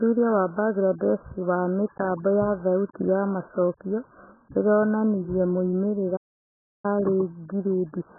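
A short speech recording is heavily band-limited from start to finish, so the voice sounds dull, muffled and smeared, with a watery, warbling texture on sustained sounds and sibilants. The likely cause is AAC compression, with the encoder starved of bits (the damage fits a very low AAC-LC bitrate around 8 kbps) and discarding everything above a low cut-off. On a spectrogram this appears as a hard ceiling with empty space above it, plus blotchy, patchy energy below it where bands have been coarsely quantised. At 6.16 s the sound cuts out abruptly and stays silent until 6.85 s, a gap of about 0.67 s, before carrying on. This is likely a playback stall, where the player ran short of data or was held up and output nothing until it recovered. The waveform shows a flat, dead line across that stretch, and the spectrogram a clean vertical blank band spanning all frequencies.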